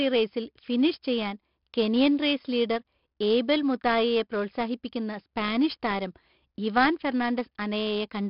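Throughout, 4-bit ADPCM compression codes each sample as a coarse predicted step, so gritty hiss rides the speech, attacks distort, and nothing remains above 5.3 kHz.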